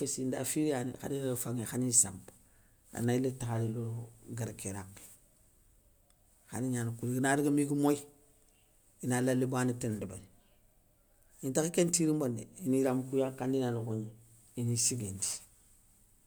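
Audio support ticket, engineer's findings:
No audible faults found in the speech; no defect to trace to any component, no action required.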